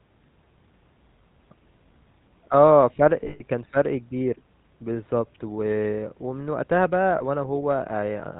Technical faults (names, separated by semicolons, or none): GSM full-rate codec; lost GSM frames